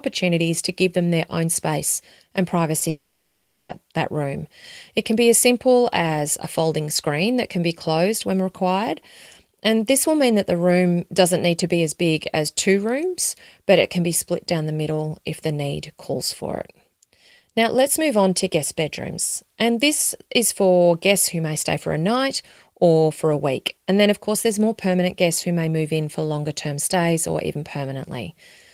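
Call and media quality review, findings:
Short concealed packet loss at 2.79 s to 2.83 s. Brief smear in the sound, about 20 ms. Receiver jitter buffer and decoder concealment. Late packet replaced by an extrapolation of the preceding sound, then crossfaded back into real audio.

Long network dropout from 2.89 s to 3.71 s. Sound stretches into a fading buzz or hiss, with no true silence, for 0.8 s. Content resumes with that stretch missing. Likely a network-side stall, masked by receiver concealment.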